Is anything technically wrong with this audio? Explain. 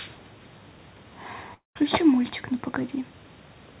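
Yes, there's a long network dropout from about 1.54 to 1.77 s, roughly 220 ms of speech that never gets played. The likely cause is packets not arriving, so the receiver fills the hole by stretching the last bit of sound into a buzzy tail that fades away, with about 160 ms of the gap ending up as silence. Then the speech just resumes, with the lost chunk gone. Everything stays below 4 kHz, which fits a G.711 mu-law call codec.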